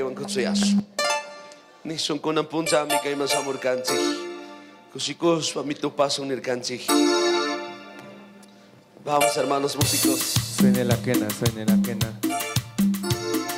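At 12.81 to 12.85 s there is a short concealed packet loss near the end of the clip. About 20 ms of audio failed to arrive in time, and the decoder covered roughly 15 ms of it by extending the preceding sound before blending back into the real signal. The result is a brief smear or wobble rather than silence. That is what separates it from a plain dropout, which would leave an audible hole, or from a click.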